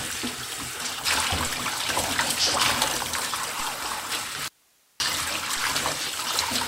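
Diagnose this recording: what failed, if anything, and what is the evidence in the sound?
The signal feed was interrupted, likely in the analogue wiring or source connection, while the recording path after the break stayed live. The result is an audio dropout to a faint residue: from 4.48 to 5.0 s, about half a second, the sound cuts abruptly to hiss roughly 35 dB down, then returns.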